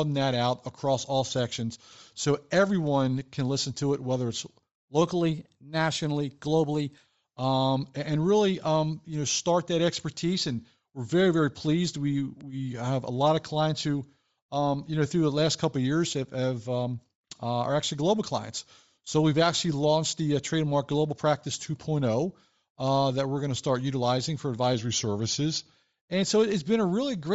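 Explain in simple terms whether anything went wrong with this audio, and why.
Several things went wrong, and they stack on top of each other.

Bluetooth LC3 compression: The sound was most likely squeezed through LC3, the codec used by Bluetooth LE Audio, at a low data rate. To save space it throws away much of the high-frequency detail and fills the gap with noise. The damage is plainly audible across the whole recording. The speech has a breathy, grainy edge.

Bit error spike: At 0.32, 2.87, 12.41 and 22.88 seconds, a single bit in the digital audio was flipped, so one sample, or three in a row at 22.88, jumped to a wrong value and immediately came back. Each one is heard as a short, sharp tick that has nothing to do with the speech around it, like a tiny click dropped onto the recording.

Drift correction step: Two devices were running on slightly different clocks, and the software keeping them in step likely changed the playback rate suddenly to keep its buffer from running dry or overflowing. 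From 5.01 to 7.06 seconds the speech plays about 6% fast and rises almost a semitone. From 24.74 to 25.74 seconds it plays about 6% slow and drops about a semitone. Both times it snaps back afterwards.

Lost LE Audio frames: At 19.05 seconds, a gap of about 15 ms went missing over the wireless link, which fits two lost frames. The decoder patched the hole by reusing the last bit of sound it had, with its detail scrambled. The result is a brief noisy smear in place of clean speech. It is too short to fade to silence.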